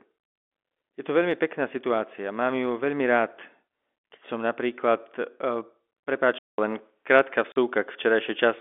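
At 6.38 s the sound goes silent for 200 ms and then returns duller and boxier, with nothing above 3.8 kHz and a new faint background hiss roughly 55 dB down. This is most likely an input switched to a poorer device. The loudness stays about the same. Unlike a codec or filter change, the gap at the switch and the new noise floor indicate different hardware.

From 7.52 to 7.56 s, a hole of 40 ms with hard edges cuts into the speech. This is packet loss filled with silence. The length fits two 20 ms packets. Unlike a device switch, the sound's tone stays the same on both sides of the gap.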